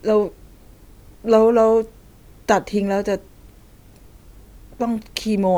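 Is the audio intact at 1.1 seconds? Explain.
Yes, the speech runs intact through 1.1 seconds, with no audible dropout, click, distortion or other fault at that moment.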